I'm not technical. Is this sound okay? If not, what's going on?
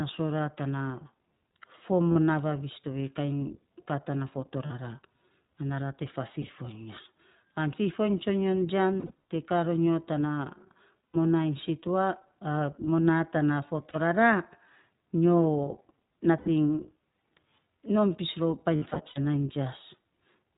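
No. The whole recording sounds a little rough, thin and slightly synthetic, like speech heard over an older internet phone call, with no crisp high end. That is the iLBC codec, a voice-call compression format that cuts away everything above 4 kHz and rebuilds the speech in short 20 ms chunks. It keeps words clear but strips out natural airiness and adds a plainly audible mechanical edge.

On top of that there are brief hiccups where the sound smears into a held, slightly buzzy or breathy tone instead of moving on. They come at 2.12 to 2.17 s, 4.66 to 4.71 s, 6.32 to 6.50 s, 9.00 to 9.12 s, 11.13 to 11.16 s, 13.90 to 13.96 s, 16.38 to 16.49 s, and longest at 18.76 to 19.19 s. These are lost iLBC frames. Pieces of the transmission went missing, and the decoder filled each hole by repeating the last bit of voice with some noise mixed in. Because each chunk stands on its own, the speech snaps back to normal right after each gap.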